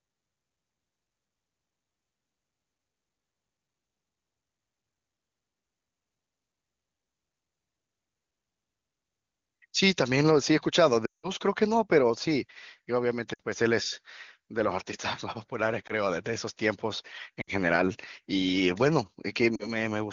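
Lost AMR speech frames at 11.05 s (180 ms), 13.34 s, 15.87 s, 17.42 s and 19.55 s. Rather than cutting abruptly to silence, the decoder repeats the last sound with falling gain, dropping to near silence within two frames.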